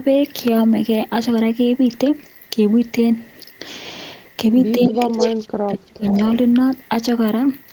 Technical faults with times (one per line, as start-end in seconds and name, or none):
4.78-6.20 speech suppressed in double talk
4.81-5.23 echo leak
6.09-6.17 echo leak